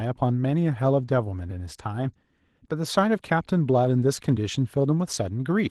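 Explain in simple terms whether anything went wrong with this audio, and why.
Yes. The speech carries Opus voice compression damage from start to finish, and it is plainly audible. To save space, the codec rebuilds the main part of the voice from a rough model and codes the airy top of the sound as a separate, thinner layer, so the voice sounds hoarse and slightly robotic. Unlike a simple muffling filter, the high end is still there. It's the texture of the voice itself that has turned grainy.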